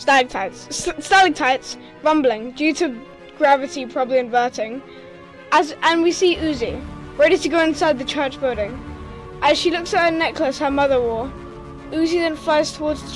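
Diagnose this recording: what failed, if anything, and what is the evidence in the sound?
Nothing failed; no fault is audible anywhere in it.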